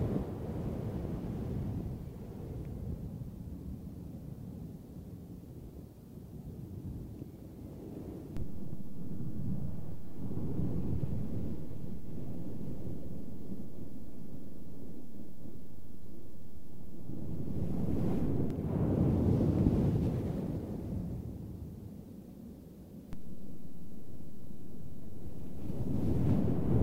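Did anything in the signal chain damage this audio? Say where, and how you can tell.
Yes. The damage sits at the converter or analogue input stage, as DC steps. At 8.37 s the waveform's zero line jumps by about -31 dBFS, and a low thump marks the moment. The offset holds until 18.50 s, where it steps back with a second thump. At 23.13 s it jumps again by the same amount and stays offset to the end. The sound itself carries on unchanged through each step. That points to an offset being switched in rather than any change in the source.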